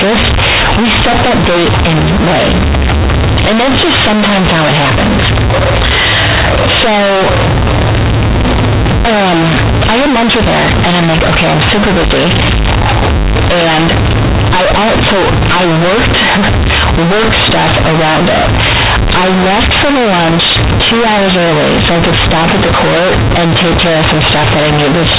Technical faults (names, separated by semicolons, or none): companded audio read as linear